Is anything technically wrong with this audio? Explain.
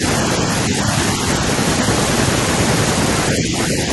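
Yes. From 3.36 to 3.54 s, the speech dips by a few decibels, most likely speech suppressed in double talk, where an echo canceller mistook overlapping talk for echo and attenuated it. The waveform envelope sags shallowly, and the spectrogram shows fainter energy across that span.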